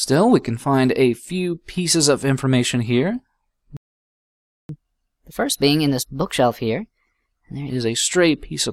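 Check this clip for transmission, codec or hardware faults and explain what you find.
Two related faults are audible: a playback stall followed by a stretch of sped-up catch-up playback.

Playback stall, 3.77 to 4.69 s. The output goes silent in mid-flow for about 0.92 s before the sound resumes. The player likely ran out of buffered data or had its output thread blocked, so nothing reached the output until it recovered. The result is an abrupt gap, clearly longer than a dropout, with the sound cut off and then restarting.

Catch-up at higher speed, 4.69 to 7.69 s. Right after the stall, the sound plays at 1.15 times normal speed for three seconds, with pitch raised by about two semitones. The player is working through its accumulated backlog by resampling faster, which shifts speed and pitch together and wins back some of the time lost in the gap. At 7.69 s the speed and pitch return to normal.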